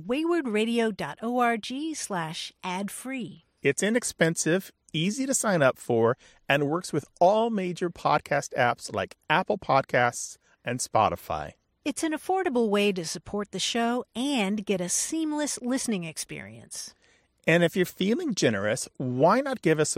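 Nothing stood out on listening to this speech recording.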